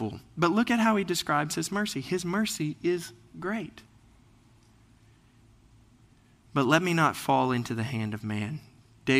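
Listening closely to the speech, nothing stood out as a technical fault at any point.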